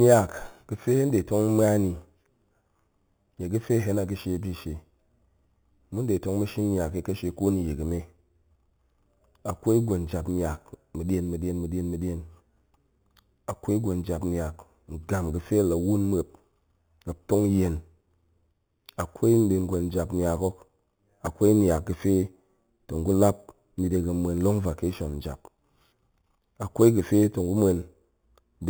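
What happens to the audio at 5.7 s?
At 5.7 s, as throughout the clip, imaging from sample-and-hold upsampling is audible. The speech was raised to a higher rate, which points to an 8 kHz original brought to 44.1 kHz, by simply repeating samples. A mirrored copy spanning 4 to 8 kHz, about 22 dB down, adds a metallic fizz that tracks the voice.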